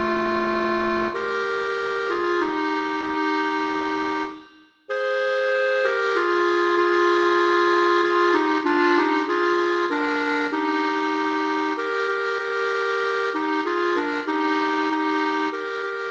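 No technical faults are audible.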